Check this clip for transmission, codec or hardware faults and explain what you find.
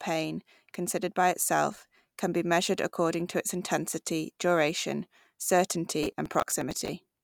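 There's one fault, near the end. From 6.03 to 6.89 s the speech picks up processor overload crackle: missed buffer deadlines, roughly twenty of them, replay short scraps of old audio, giving a gritty tearing.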